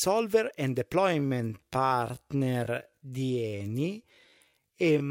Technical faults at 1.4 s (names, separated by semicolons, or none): time-stretched section